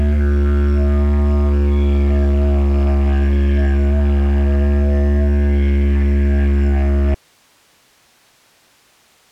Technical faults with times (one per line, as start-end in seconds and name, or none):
7.14-9.31 audio dropout to a faint residue